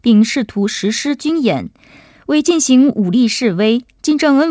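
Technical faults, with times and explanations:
No technical faults turn up here; the speech comes through the call path just as you'd expect from a G.722 link, with nothing above 8 kHz.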